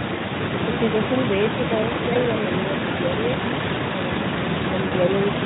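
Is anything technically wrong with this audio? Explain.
Yes. There is VoIP packet loss concealed by the speech codec at 2.13–2.17 s and 4.87–4.95 s, consistent with losing one and then two 20 ms frames. The Speex-coded speech around these gaps carries only light coding roughness. For each gap, the decoder extrapolated from its last pitch and filter state with falling gain, so the speech briefly smears into a buzzy tone or coloured noise that fades. Because each decoded frame builds on the previous one, the speech stays weak or distorted just after each gap.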